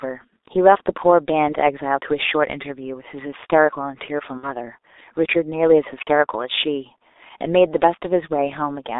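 From the start, the speech runs through a G.723.1 codec. The band is held to roughly 300 Hz to 3.7 kHz, and the damage is heavy. The sound is muffled and hoarse, consonants smear, and the coarse texture points to about 6.3 kbit/s.

At 4.37 s comes VoIP packet loss concealed by the speech codec. The decoder repeats its last pitch and filter and fades them, stretching the sound out as it dims. About 60 ms is missing, which fits two lost 30 ms frames. The speech stays weak until 4.52 s.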